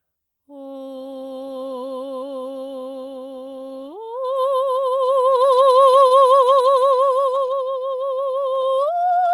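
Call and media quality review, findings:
Music held briefly at 6.07–6.14 s, slight buzz or dip, nothing lost. Short stall from a late packet: jitter buffer ran dry, receiver stretched about 32 ms, playout delay up 32 ms.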